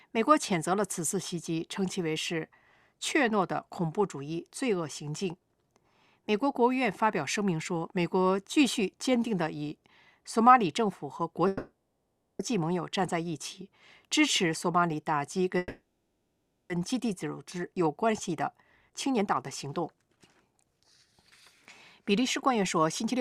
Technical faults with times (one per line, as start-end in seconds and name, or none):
11.47-12.42 call audio freeze
15.58-16.73 call audio freeze
17.72-18.30 jitter buffer speed-up
18.91-19.25 jitter buffer speed-up
19.65-21.08 jitter buffer speed-up
22.09-23.20 jitter buffer speed-up